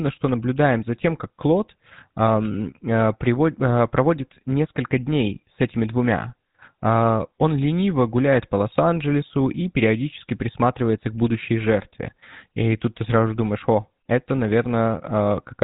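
Speech, passed through the GSM full-rate codec for its whole length. A buzzy, gravelly roughness is plainly audible throughout. Nothing survives above 3.8 kHz. The codec models the vocal tract and excites it with sparse regular pulses, which fits a 13 kbps stream.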